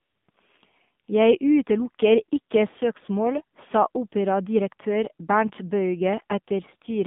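AMR narrowband mobile codec runs throughout. The speech is squeezed into a line band of 150 Hz to 3.6 kHz, and the codec models the vocal tract with sparse pulses, which leaves the voice plainly buzzy and synthetic. The damage fits a low rate near 7.4 kbps.

AMR comfort noise appears from 0.00 to 0.28 s, 0.30 to 0.34 s, and 1.06 to 1.08 s. No speech frames were sent there, so the receiver substituted smooth generated noise that switches in and out abruptly, replacing the real background.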